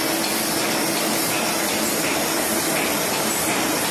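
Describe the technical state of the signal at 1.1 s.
At 1.1 s the signal is intact, with no audible fault at that moment.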